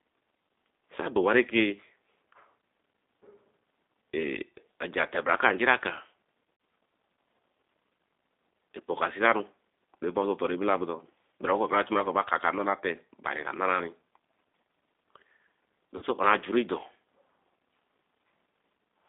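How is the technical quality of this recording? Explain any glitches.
Quality is poor throughout: the speech is confined to a narrow telephone band and has two brief dropouts.

Across the whole recording the speech sounds thin, slightly rough and synthetic, with nothing below about 250 Hz or above 3.7 kHz. That is the G.729 codec at 8 kbit/s, which rebuilds each 10 ms frame from a vocal tract model, a pitch predictor and a few pulses rather than the actual waveform.

At 6.54 to 6.60 s the speech briefly turns into a fading smear. This is VoIP packet loss concealed by the speech codec. About 60 ms of audio went missing, which fits six 10 ms frames. The decoder repeated its last pitch and filter at falling gain.

At 15.97 to 16.04 s the same smeared fade recurs. About 50 ms was lost here. Because each frame builds on the one before, the sound stays weak or distorted for tens of milliseconds after the packets resume.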